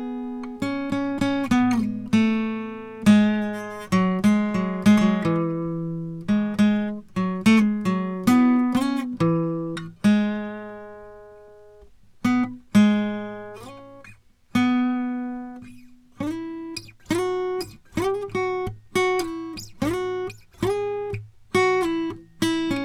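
Listening to the music from beginning to end, nothing stood out as a technical fault.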